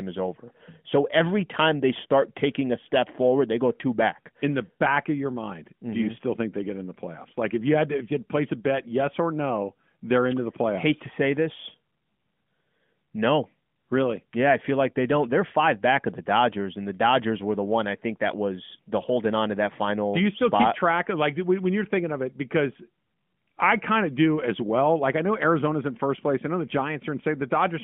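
No faults found: the speech sits within a 150 Hz to 3.4 kHz telephone band with the light coding texture expected of AMR narrowband mobile coding, consistent with its 12.2 kbps mode.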